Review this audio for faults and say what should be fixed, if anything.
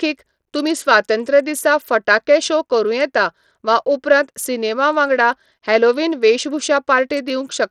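Bluetooth SBC compression throughout: the speech's treble flickers and drops out beneath gritty aliasing, likely from a starved bit pool, which fits a bitrate near 80 kbps. Record through a wired input or a higher-quality codec rather than a low-bitpool SBC link.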